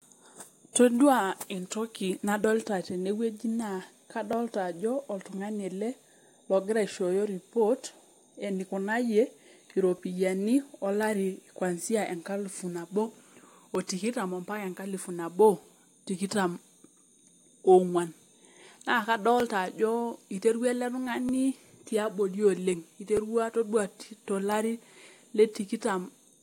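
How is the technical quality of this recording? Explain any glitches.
The recording has one recurring glitch. From 0.56 s to 25.05 s, regular clicks cut into the speech every 1.89 s, about fifteen in all. The likely cause is clock drift buffer slips: two device clocks differing by around 500 ppm force a few dozen samples to be dropped or repeated at each slip.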